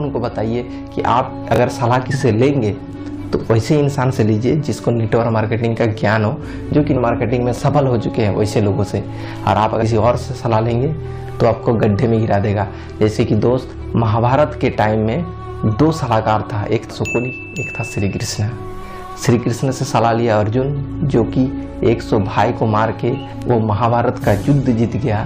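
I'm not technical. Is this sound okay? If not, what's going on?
No. At 1.54–1.58 s and again at 7.54–7.58 s there are chunks out of order: a short 20 ms piece of sound plays one step late, after the piece meant to follow it. You hear a brief jumbled flutter.

There are also compressed frames skipped at 2.10, 6.96, 9.81 and 18.82 s. The audio jumps forward, losing about a tenth of a second at 2.10 and 18.82, about a fifth at 9.81, and about a third at 6.96.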